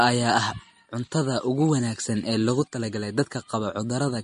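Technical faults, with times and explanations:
Throughout, MP3 compression: plainly audible coding damage and nothing above 10.6 kHz, likely from an encoder zeroing weak frequency lines at a low bitrate near 40 kbps.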